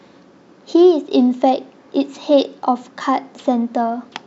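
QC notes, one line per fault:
No audible technical faults: the speech signal keeps a steady level and unbroken continuity throughout.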